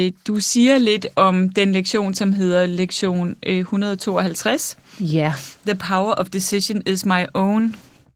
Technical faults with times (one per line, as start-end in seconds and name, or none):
0.00-8.16 Opus voice compression